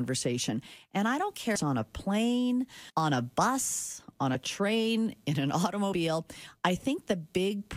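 At 1.54 s, the speech jumps forward because compressed frames were skipped. About 300 ms of audio is simply never played. Missing or rejected frames leave the decoder to continue from a later one. The same happens from 2.89 to 2.91 s, again losing about 300 ms. Shorter skips follow at 4.34 s, around 30 ms, and 5.92 s, around 50 ms.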